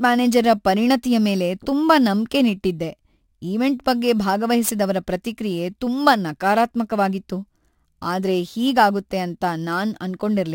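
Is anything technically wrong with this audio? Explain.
Yes, there's imaging from sample-and-hold upsampling throughout. Samples were just repeated, which fits a 24 kHz source raised to 44.1 kHz, leaving mirrored speech from 12 to 24 kHz at about -24 dB, a metallic fizz tracking the voice.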